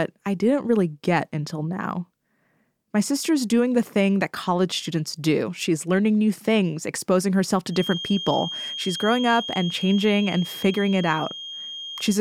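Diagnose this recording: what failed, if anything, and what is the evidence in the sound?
From 7.67 s to the end, a thin 3.2 kHz whistle sits about 10 dB below the speech, swelling and fading slowly in level; a spectrogram shows one unbroken horizontal line. This feedback whistle is likely an analogue loudspeaker-to-microphone loop held just short of runaway.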